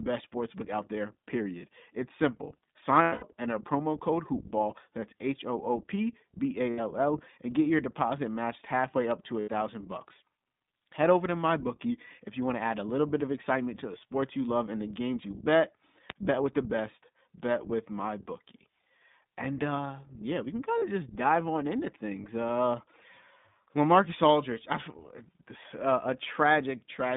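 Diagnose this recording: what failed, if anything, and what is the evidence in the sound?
The coding stage is an iLBC codec at 15.2 kbps with 20 ms frames. Passband runs about 150 Hz to 3.7 kHz, and the speech carries a plainly audible rough, synthetic texture. That texture separates it from simple telephone-band filtering, which narrows the sound without coarsening it.

The network stage dropped packets, giving lost iLBC frames at 3.02–3.24 s (180 ms lost, scattered over 200 ms, longest run around 100 ms), 6.70–6.80 s and 9.40–9.49 s (80 ms each), and 20.78–20.84 s (40 ms). The decoder repeats the last pitch cycle mixed with noise, so each gap sounds like a held, buzzy vowel rather than silence. Because iLBC frames stand alone, speech snaps back immediately afterward.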